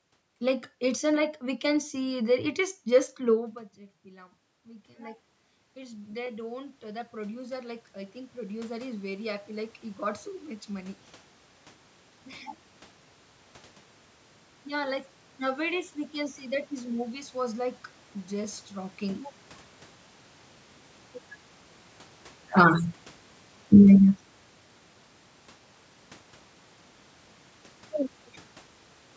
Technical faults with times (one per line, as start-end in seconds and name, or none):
4.03-11.03 automatic gain rising